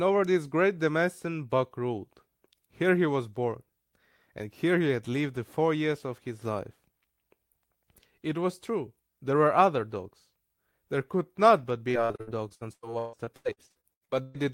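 Speech runs cleanly until about 11.91 s, when repeated packet loss (robotic sound) sets in and lasts to about 14.36 s. Around twenty short holes break the audio, the longest about 147 ms, and each is patched by stretching the last received sound. About a second of the stretch is concealment filler, giving a choppy, robotic texture with pieces missing. On a spectrogram this appears as repeated, frozen harmonic bands interrupted by vertical breaks. The waveform shows uneven gaps and looped, oddly regular segments.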